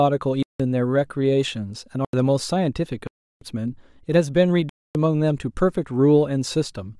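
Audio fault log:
0.43–0.60 s, 2.05–2.13 s, 3.07–3.41 s, 4.69–4.95 s: block of digital silence. The speech drops to silence for about 171, 85, 341 and 256 ms, cutting out and back with no fade or concealment. The first three gaps fit whole 4096-, 2048- and 8192-sample buffers left unfilled.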